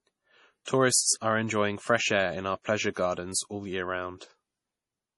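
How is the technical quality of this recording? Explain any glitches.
The recording is of poor technical quality, with heavy compression damage throughout. The likely cause is MP3 compression at a starved bitrate, consistent with 32 kbps. The encoder removed everything above 11.4 kHz and let weak frequency lines flicker between frames, so the speech sounds dull, watery and swirly, with metallic sibilants and smeared onsets.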